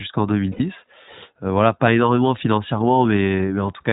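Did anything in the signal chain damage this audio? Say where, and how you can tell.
Yes. The iLBC codec shapes the whole clip, a codec-stage fault. Nothing sounds above 4 kHz, and the speech has a plainly audible rough, synthetic edge from frame-by-frame excitation coding, which fits iLBC's 20 ms, 15.2 kbps mode.

Lost iLBC frames at 0.52–0.62 s are a network-stage fault. An 80 ms gap is filled by a held, slightly buzzy vowel as the decoder repeats the last pitch cycle with noise, which points to four lost frames. Clean speech resumes immediately because each frame decodes independently.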